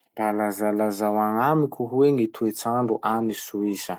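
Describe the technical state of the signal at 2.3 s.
At 2.3 s the speech is inside a call bitrate drop running from 2.15 s, just after "lazalazao agnamiko hoe", to the end. The encoder falls from 48 to 18 kbps, so coarser coding makes the sound rough and muffled. A spectrogram would show the upper band thinning and smearing.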